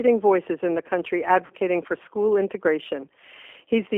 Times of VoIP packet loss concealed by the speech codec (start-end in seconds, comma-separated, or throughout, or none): 1.46-1.54